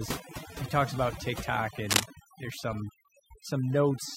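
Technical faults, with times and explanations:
Throughout: overdone noise removal. The pauses drop to near silence flecked with twinkling specks. Bands near the noise estimate were cut hard, taking quiet parts of the voice with them. This differs from steady hiss, which leaves the background even.
1.89 to 2.05 s: cable scratch noise. A dense, uneven burst of scratching rides over the speech, a little louder than it, then stops. Its likely cause is a worn cable or connector being moved, its contact resistance jumping rapidly. Unlike a single click, it is a rustling cluster.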